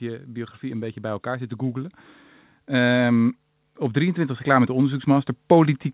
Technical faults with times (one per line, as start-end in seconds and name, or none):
0.05-1.98 automatic gain rising
2.53-5.94 automatic gain rising